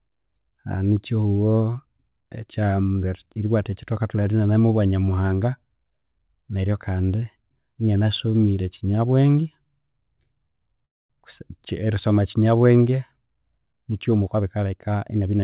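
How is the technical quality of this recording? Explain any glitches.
The recording has two timing glitches near the end, heard over narrowband audio with nothing above 4 kHz, which fits a G.711 mu-law call codec at 64 kbps.

From 10.85 to 11.13 s there is a call audio freeze. Packets were likely held up in transit, so the jitter buffer ran dry. The receiver filled about 245 ms, most of it (about 230 ms) silence, then resumed where it stopped. Nothing is lost, but the delay grows by 245 ms.

From 14.19 to 15.40 s there is a jitter buffer speed-up. With the excess delay built up, the receiver trimmed short pitch-period pieces repeatedly, cutting roughly a fifth of a second. The speech plays at 115% speed with unchanged pitch and sounds rushed.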